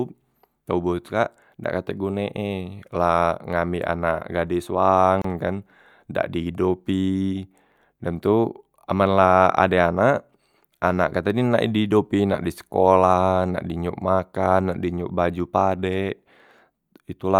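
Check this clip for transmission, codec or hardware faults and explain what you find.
One codec fault is present. At 5.22 to 5.24 s the speech has a gap at a join of encoded pieces: separately encoded segments were spliced untrimmed, leaving 28 ms of encoder delay and padding as a silence with smeared edges before the speech resumes where it stopped.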